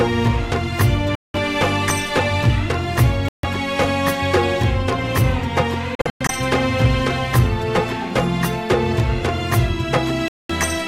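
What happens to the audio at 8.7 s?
Nothing goes wrong at 8.7 s; the audio plays through that moment intact, with no dropout, click, glitch or other fault.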